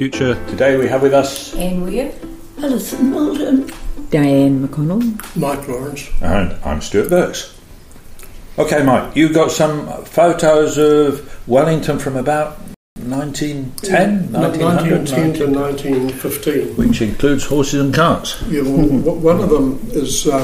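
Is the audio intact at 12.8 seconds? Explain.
No. A playback stall from 12.74 to 12.96 s cuts the sound off for 218 ms, likely because the player ran out of data or its thread was blocked.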